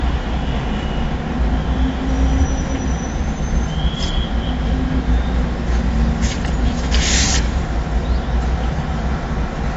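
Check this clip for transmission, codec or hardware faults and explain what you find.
One codec fault runs through the whole clip. AAC compression, throughout: the audio stops dead above 7.6 kHz and sounds dull and smeared, likely from AAC-LC at a low bitrate around 24 kbps.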